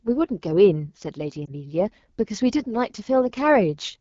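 Throughout the speech, the sound is rough and raspy, with a hissy top. This is the AMR wideband (HD Voice) codec running at a low rate, which fits about 8.85 kbit/s, too little for its pulse-driven vocal tract model to capture the voice cleanly.

From 1.45 to 1.51 s there is a brief dip and warble as the voice wavers and sags. This is a lost AMR speech frame, which fits a single missing 20 ms frame. The decoder reused the last good pitch and vocal tract settings at falling gain until good frames resumed.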